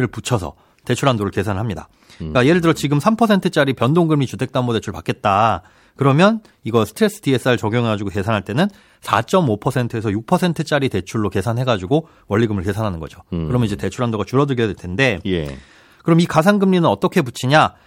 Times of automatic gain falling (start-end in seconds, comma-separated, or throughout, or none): none